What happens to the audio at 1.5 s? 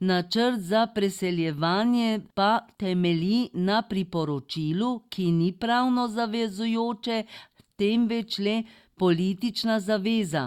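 Nothing goes wrong at 1.5 s: the speech carries on intact through that moment, with no dropout, click or distortion.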